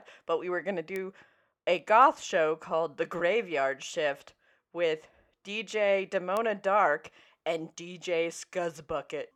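Bit error spikes at 0.96 s and 6.37 s: a flipped bit in a stored or transmitted sample makes the value leap by a power of two and return at once, which fits one corrupted sample and then two. Each sounds as a sharp, broadband tick, peaking at about −17 dBFS and unrelated to the speech.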